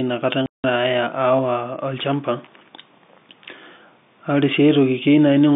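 Packet loss filled with silence at 0.46 to 0.64 s: about 180 ms of packets went missing and silence replaced them, leaving a hard-edged hole.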